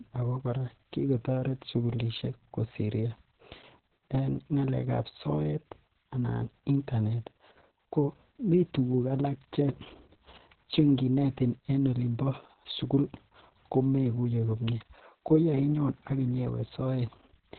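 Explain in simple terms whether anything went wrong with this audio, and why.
Yes, something went wrong, and it lasts the whole recording. The speech sounds muffled, like a phone call, with a hoarse, slightly robotic edge, and nothing is heard above about 4.3 kHz. The cause is heavy Opus voice compression: to save space, the coder kept only the narrow band a phone line carries and rebuilt the voice from a rough model of the throat and breath, so the fine detail was lost.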